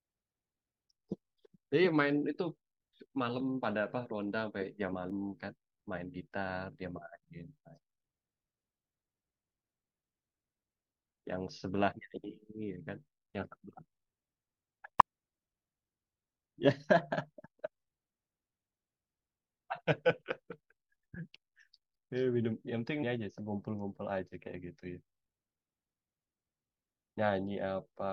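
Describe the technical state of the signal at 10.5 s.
At 10.45 s the speech is hit by damaged data in a compressed stream. It is a single, very brief event. Part of the encoded data at that point is corrupt. Bytes may have been lost, zeroed or overwritten. The decoder cannot read the affected frame properly. It loses its place and hunts for the next valid frame header before decoding resumes. The result is a short chirp, squawk, click or short hole that cuts across the speech.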